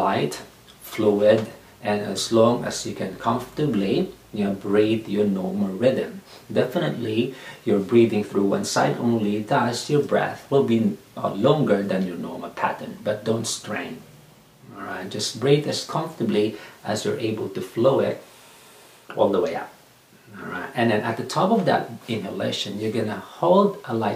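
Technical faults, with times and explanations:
No technical faults detected.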